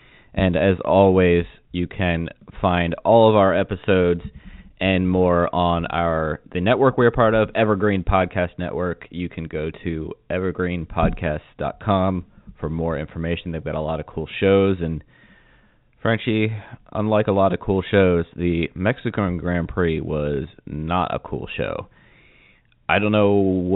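No technical faults are audible.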